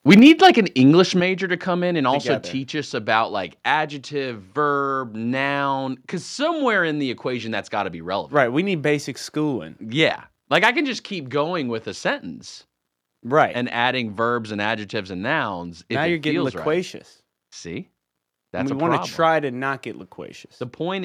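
From 0.09 to 0.5 s the opening speech has a harsh, crackling edge on its loudest syllables, with peaks pushed about 6 dB past the converter's limit and a few percent of the samples flattened. This is likely microphone overload: the input volume was set so high that the converter's limit sheared off the waveform tops. A milder repeat comes at 10.55 to 10.69 s, just before "can just keep going", where the peaks exceed the limit by about 1 dB and under one percent of the samples clip, so the roughness is brief.

At 0.19 s, in the middle of that first distorted stretch, the speech and its background both fall abruptly by about 4 dB. At 1.2 s, just before "to come in and", a second, larger drop of about 6 dB follows. These sudden level steps are likely the microphone volume being stepped down by the call software as it reacted to the overload and cut the device's input gain.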